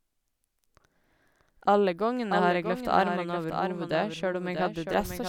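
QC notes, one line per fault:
Throughout: doubled audio track. A second full-band copy of the speech trails the original by roughly 0.7 s at a level a few decibels lower, with no decay or room colour, likely from the signal being captured again through a slower parallel path.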